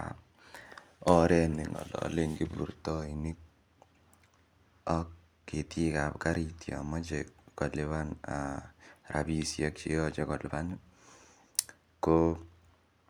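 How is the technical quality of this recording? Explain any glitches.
Nothing in this recording catches the ear as a glitch; the speech comes across without any dropouts, clicks or other technical hiccups to explain.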